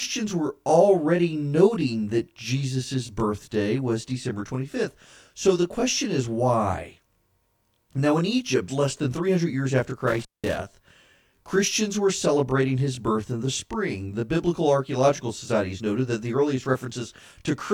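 Throughout the speech, channel delay (comb filtering) makes the voice sound rough and slightly doubled. One channel lags roughly 20 ms, so the mono sum cancels at evenly spaced notches near 20 Hz upward. From 10.08 to 10.57 s, right after "years after", an intermittent contact breaks the line. It opens for 213 ms, cutting out with crackle at both edges.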